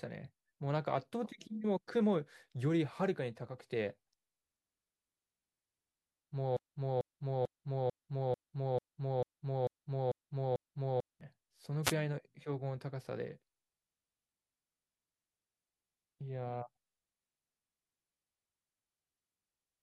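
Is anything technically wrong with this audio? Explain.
Yes, there are two faults in this speech clip.

From 6.57 to 11.21 s there is a broken-record loop. The playback or stream likely stalled and kept resending its last buffered fragment, so a 0.44 s piece of speech repeats ten times back to back, and the speech that belonged in that span is missing.

From 11.83 to 11.94 s there is a wireless microphone noise hit. The FM radio link faded as reflected signals cancelled, letting receiver noise rise over the voice, which is heard as a brief swish of static.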